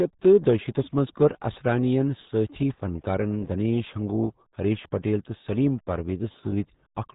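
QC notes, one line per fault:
Throughout, RealAudio 14.4 codec. The speech is heavily damaged, muffled and gargly. Nothing passes above 3.8 kHz, so sibilants and crisp consonant edges are lost. The smeared, watery texture points to an 8 kbit/s dial-up speech codec.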